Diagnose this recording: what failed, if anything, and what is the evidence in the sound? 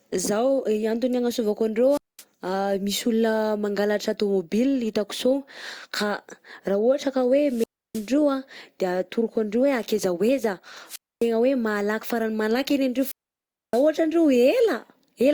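The speech breaks up four times, at 1.89–2.24 s, 7.45–8.12 s, 10.86–11.29 s and 12.95–13.87 s. Each break is a short swell of hiss, then a hole of near silence lasting about 215, 312, 258 and 619 ms, before the speech returns. This is a wireless microphone squelch dropout in the analogue radio link ahead of the converter. The FM signal faded until the receiver's squelch muted its output, and each return came as the signal recovered.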